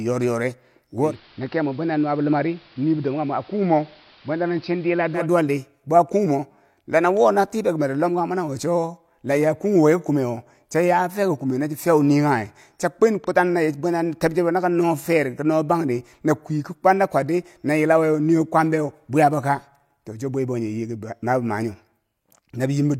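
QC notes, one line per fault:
1.0–5.28 s, digital radio blending to analogue: the receiver dropped its digital signal and cross-faded over about 160 ms to the AM broadcast, so level sinks about 3 dB, and a hiss floor comes in roughly 30 dB down.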